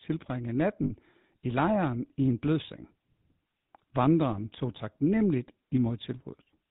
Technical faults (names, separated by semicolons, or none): GSM full-rate codec; lost GSM frames